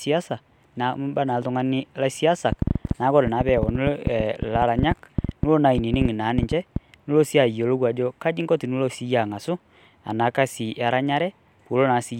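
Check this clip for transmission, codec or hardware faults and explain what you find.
One fault is present: a train of clicks from 2.52 s to 6.77 s in the speech. Roughly forty sharp, similar pulses arrive at about 8 per second, unevenly spaced, and stand out well above the speech, around 15 dB at their peaks. They tick through pauses too. That fits likely interference or a struggling interface injecting pulses. Unlike dropouts, nothing is removed, and unlike random crackle, the clicks share one shape and a steady density.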